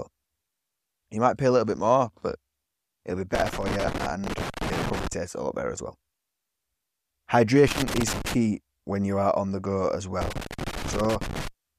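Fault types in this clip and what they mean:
Loose connector crackle: irregular bursts of scratchy crackle chop up the speech three times, from 3.35 to 5.13 s after "it'll be", 7.68 to 8.34 s, and 10.22 to 11.48 s. A worn or dirty contact is rapidly making and breaking the signal path.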